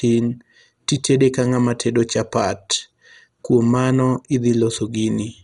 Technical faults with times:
0.00-5.43 MP2 compression

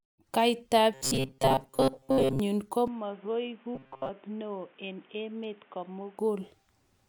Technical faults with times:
0.94-2.40 robotic sound from repeated short buffers
2.88-6.19 input switched to a poorer device
3.75-4.10 robotic sound from repeated short buffers

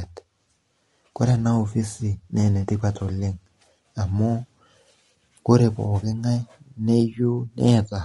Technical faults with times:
0.00-8.04 low-delay AAC compression

